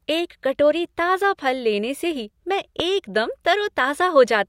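It's a speech clip with a single loud pop from 2.80 to 2.82 s, a sharp spike roughly 15 dB above the speech, likely a voltage pulse from a plug, switch or static discharge.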